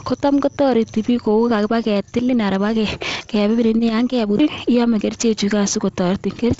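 Nothing stood out on listening to this speech clip, which carries the band-limited sound of G.722 wideband telephone coding with nothing above about 7.8 kHz.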